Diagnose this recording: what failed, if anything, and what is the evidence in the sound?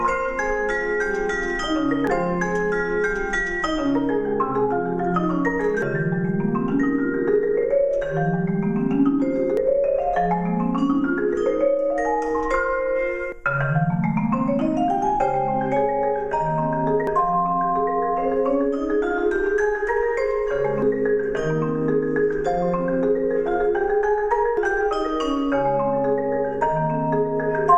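Audio missing between chunks, likely at the buffer or recording stage: abrupt skips at 2.07, 5.82, 9.57, 13.32, 17.07, 20.82 and 24.57 s, every 3.75 s. Each loses roughly 300 ms where 4 s chunks are closed and reopened, with the sides spliced directly.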